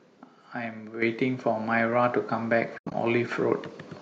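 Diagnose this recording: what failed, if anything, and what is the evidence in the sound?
At 1.02 s the whole speech signal, voice and background noise alike, jumps up by about 8 dB in a single step and stays there. That is a microphone volume stepped up in call processing: the software judged the input too quiet and raised the device's capture gain at once rather than ramping it. Because the change is applied before anything else, everything in the signal rises together, and the step is instant rather than gradual.

From 2.78 s to 2.94 s the speech drops out in soft-edged holes, about 120 ms of missing sound scattered over 160 ms, with the longest silent run roughly 100 ms. This is AAC frame loss with muting at the network and codec stage. Lost frames reached the decoder as nothing, so it zeroed their spectrum, and the overlapping transform windows faded the sound out and back in around each gap. 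The short granularity of the holes fits 10 ms frames, likely from a low-delay AAC stream.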